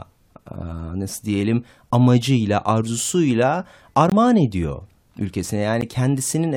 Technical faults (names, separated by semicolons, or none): block of digital silence